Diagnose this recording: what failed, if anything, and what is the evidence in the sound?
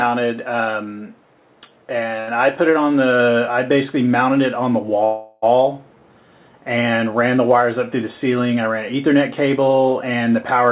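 At 2.2 to 2.29 s the sound is held for 72 ms, stretched with a buzz or dip, then resumes exactly where it left off with nothing lost. This is a short stall from a late packet: at the network and jitter-buffer stage, a packet arrived late, the buffer ran empty, and the receiver stretched the last sound until the packet came.

From 5.05 to 5.44 s the audio freezes for 375 ms. The last sound continues as a fading buzz or hiss without dropping to silence, then carries on from the same point. This is a call audio freeze, likely from packets held up on the network that drained the jitter buffer. The fill sits within the G.711 A-law band, which has nothing above 4 kHz.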